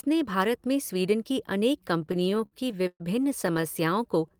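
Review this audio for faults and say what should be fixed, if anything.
Repeated stalls (stutter) break up the speech from 1.99 to 3.02 s. Packets arrived late or too slowly, so the jitter buffer kept running dry. The receiver stretched the last sound to cover each gap, fading it in the longer ones. About a third of that span is filler, roughly 324 ms. The longest hold lasts 129 ms. A shorter burst follows from 3.42 to 3.65 s, with brief holds of 12 ms or less. Nothing is lost, but the speech drags. A deeper or adaptive jitter buffer, or a steadier network path, would prevent this.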